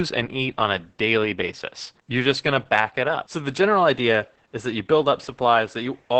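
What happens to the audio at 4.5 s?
At 4.5 s the speech carries Opus voice compression, as it does across the whole clip. Nothing sounds above about 8.7 kHz, the wideband limit. The coder models the voice with linear prediction and codes the excitation very coarsely. The damage is heavy. Speech sounds muffled, hoarse and slightly robotic. That texture points to the SILK mode at a low bitrate, around 10 kbps, with 20 ms frames.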